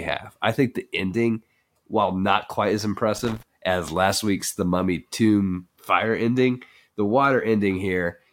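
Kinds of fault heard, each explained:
Loose connector crackle: a worn or dirty contact is flickering open and shut, chopping the signal into a scratchy, irregular burst. Here it lasts about a quarter second, from 3.16 to 3.43 s, right after "while not quite as" and before "as last week's".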